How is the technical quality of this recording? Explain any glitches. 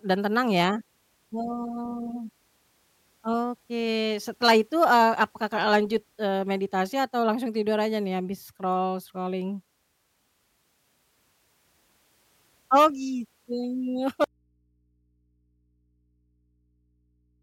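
The recording has one clear glitch. At 14.24 s the speech suddenly drops out to a faint residue. Only low mains hum remains, roughly 45 dB down, until the end. The break is abrupt. The likely cause is a lost signal feed while the input stayed live.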